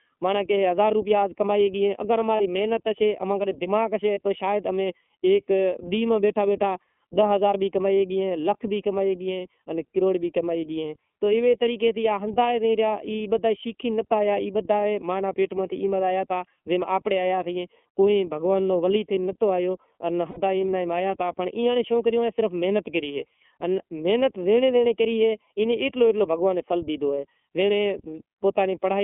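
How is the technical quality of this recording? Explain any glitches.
Technical quality is fairly poor. The sound is phasey, band-limited and codec-roughened throughout, and it has three short dropouts.

The channel delay (comb filtering) runs the whole way through. One channel lags by about a third of a millisecond, and summing to mono notches out evenly spaced frequencies starting around 1.5 kHz, which leaves the voice hollow.

The iLBC codec is also there throughout, and its damage is plainly audible. The band is squeezed to 250 Hz to 3.4 kHz, with a rough, synthetic edge that fits the 13.33 kbps, 30 ms frame mode.

There are lost iLBC frames at 2.37 s (30 ms), 4.14 s (30 ms) and 20.30 s (60 ms, likely two frames). The decoder fills each gap with a repeated pitch cycle plus noise, so you hear a brief buzzy held vowel, and the voice snaps back right after.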